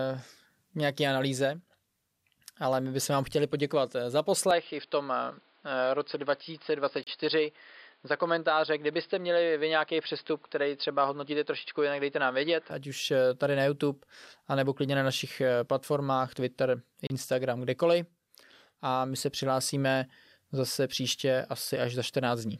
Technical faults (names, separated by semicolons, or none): input switched to a poorer device; gap at a join of encoded pieces